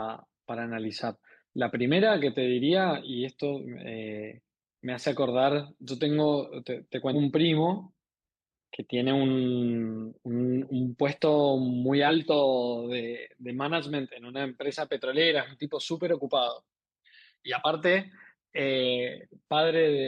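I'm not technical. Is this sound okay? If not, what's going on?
No. Around 7.12 to 7.15 s and again at 12.07 to 12.11 s, the speech jumps ahead. These are compressed frames skipped: chunks of the stored audio, each 42.7 ms long, never get played. The first jump loses about a third of a second, the second about one chunk.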